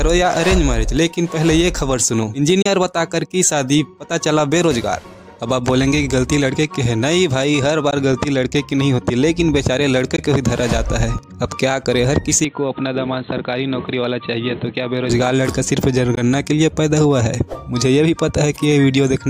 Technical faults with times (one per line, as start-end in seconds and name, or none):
2.62-2.66 Bluetooth dropout
7.91-7.94 Bluetooth dropout
10.16-10.19 Bluetooth dropout
12.44-15.10 input switched to a poorer device
16.15-16.20 Bluetooth dropout